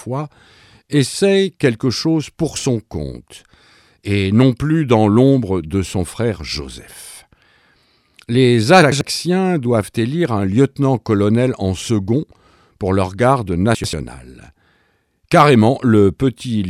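At 8.82 to 9.01 s and again at 13.75 to 13.93 s, chunks out of order: a block of about 93 ms plays one block late. Each spot is a brief jumbled stutter with three hard joins. Unlike a dropout, no audio is missing.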